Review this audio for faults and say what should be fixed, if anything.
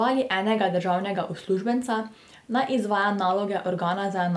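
Nothing stood out on listening to this speech, so there is nothing to fix.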